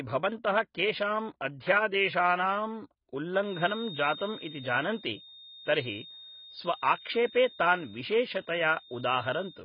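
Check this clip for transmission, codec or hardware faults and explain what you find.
Two faults are audible: codec damage across the whole recording and a whistle in its second part.

AAC compression, throughout: the speech sounds dull and smeared, with nothing above 5 kHz. A spectrogram shows a hard ceiling and patchy bands, likely from heavy AAC-LC coding at a very low bitrate, around 16 kbps.

Feedback whistle, from 3.36 s to the end: a thin, steady 3.7 kHz tone sits about 20 dB below the speech, drawn as a single horizontal line on a spectrogram, likely from a loudspeaker-to-microphone loop hovering at the edge of feedback.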